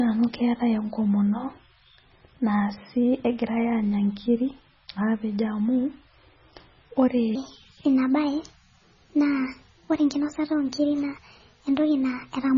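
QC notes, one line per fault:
Throughout: MP3 compression. The speech sounds watery and swirly. Weak frequency detail flickers in and out between frames, and attacks smear. The damage is heavy, which points to a very low bitrate of likely around 16 kbps.
7.35 to 12.58 s: section at the wrong speed. From 7.35 s to the end, the speech runs 1.29 times too fast. Pitch rises by about four semitones with it, so it sounds high and hurried. It was likely played against the wrong clock.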